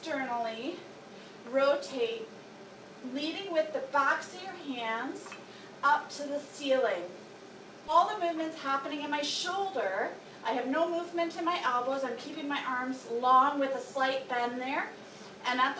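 At 7.88 to 7.90 s there is a skip ahead. About 0.7 s of audio was dropped while later audio was already queued. Playback jumps straight to that later sound. There is no filler and no gap. The two sides butt together abruptly.

From 9.11 to 10.32 s comes a jitter buffer speed-up. The buffer held more audio than its target. The receiver trimmed tiny pitch-period slices, about 50 ms in total. The sound runs at 104% with unchanged pitch. Throughout, nothing reaches above 8 kHz, consistent with a G.722 call path.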